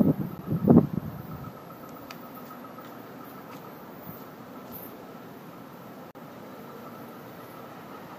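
The audio has two blocks of digital silence: a 10 ms gap at 0.38 s, heard as a tick, and a 40 ms hole from 6.11 to 6.15 s. The signal drops to silence with no fade, unlike a faded or concealed dropout. This points to output buffers not filled in time.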